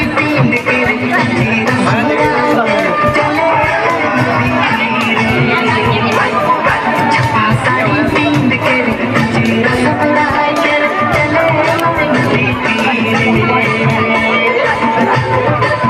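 Right from the start and all the way through, there's gain pumping. The level keeps rising in the quiet gaps, then ducks down whenever something loud comes in, swinging around 5 dB each time. It breathes like that for the whole clip, and loud and soft passages sit squashed close together. The likely culprit is input gain set way too hot, with a fast limiter or compressor clamping down on every peak.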